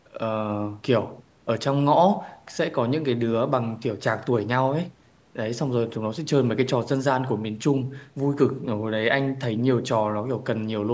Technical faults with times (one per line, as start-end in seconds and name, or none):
none